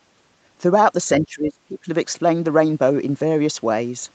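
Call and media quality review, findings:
Speech suppressed in double talk, 1.23–1.89 s. Echo canceller likely mistook near-end talker for loudspeaker echo during simultaneous talk and attenuated both. Speech dips and breaks up, deepest drop about 25 dB, roughly half a second affected in total. No content above 8 kHz throughout, consistent with the wideband Opus call path; that band limit is separate from this event.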